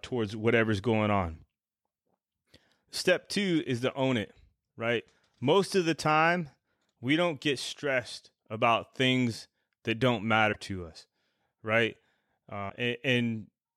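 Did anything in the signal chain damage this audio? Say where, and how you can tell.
Yes, at the codec stage: a likely broken MP3 bit reservoir after dropped frames, as frames lose their borrowed data, leaving short glitches at 10.52–10.56 s and 12.68–12.72 s.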